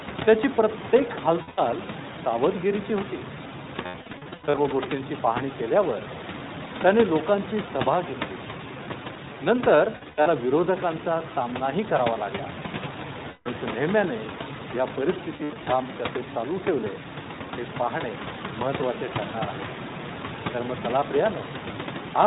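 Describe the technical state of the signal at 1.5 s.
At 1.5 s you're right inside a burst of lost iLBC frames, running from about 1.42 to 1.6 s. Around 140 ms of audio went missing, scattered over that 160 ms stretch in runs of up to roughly 70 ms, which fits a handful of dropped 20 ms frames. The decoder covers each hole by repeating the last pitch cycle mixed with noise, so the gap comes across as a held, slightly buzzy or breathy vowel. Because each frame decodes on its own, the speech snaps back almost immediately afterwards.

Underneath that, the whole clip carries the iLBC codec sound, consistent with a rate around 15 kbps. It's narrowband, so nothing above 4 kHz survives, and the coding damage is plainly audible as a slightly rough, synthetic edge on the speech.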